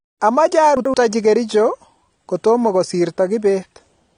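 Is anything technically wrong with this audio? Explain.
Yes. Two faults can be heard.

Throughout the clip, the speech sounds dull and smeared. Nothing is heard above about 9.6 kHz. Sibilants have a fizzy, warbling texture, and the codec damage is plainly audible. The likely cause is AAC compression at a low bitrate, with a sound that fits roughly 32 kbps. The encoder quantises each frame's frequency lines against a hearing model. When bits run short, it lowers the cut-off and starves or fills the upper bands.

From 0.77 to 0.94 s, there are chunks out of order. A short piece of audio, about 85 ms long, plays one chunk late, after the piece that should follow it. No audio is lost, but the sequence is wrong. Three hard joins result. The moment sounds briefly jumbled, as if the speech stumbles back on itself.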